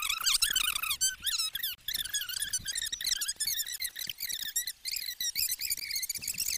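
A gap at a join of encoded pieces recurs every 2 s: a 29 ms gap at 1.75–1.78 s, then 16 ms at 3.78 s and 5.80 s. Separately encoded segments kept their start delay and final-frame padding. This shows as flat waveform dropouts and narrow blank spectrogram stripes with smeared edges.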